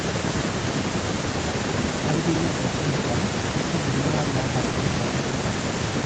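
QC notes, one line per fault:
No faults to log in this speech clip. The call path leaves nothing above about 8 kHz, which is normal for this link.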